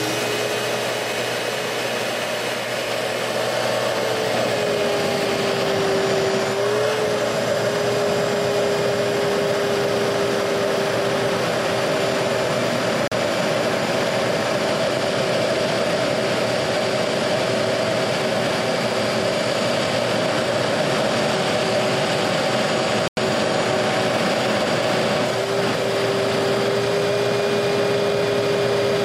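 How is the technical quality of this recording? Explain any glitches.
Two brief dropouts interrupt the audio. The first runs from 13.08 to 13.12 s, with about 40 ms of silence. The second, at 23.08 to 23.18 s, lasts about 92 ms. Both sound like a Bluetooth stall. The sound cuts cleanly to nothing, then resumes. The likely cause is radio interference delaying packets. The headphones' buffer empties and playback halts until retransmitted data arrives.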